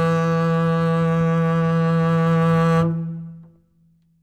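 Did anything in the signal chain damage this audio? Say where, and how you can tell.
No, nothing in this music clip points to damage at any stage of the signal chain.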